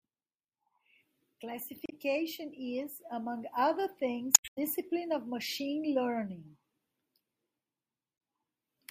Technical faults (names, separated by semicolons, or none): damaged data in a compressed stream